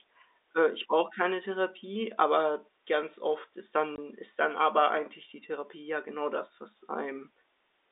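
Speech, carried over a G.711 telephone line whose band runs about 300 Hz to 3.7 kHz, with a packet loss filled with silence from 3.96 to 3.98 s. For 20 ms the sound simply stops, which fits a single lost packet that the receiver replaced with nothing. A concealment scheme would stretch or repeat the neighbouring sound to cover the hole. Here the gap is true silence with abrupt edges, lasting exactly one packet's length.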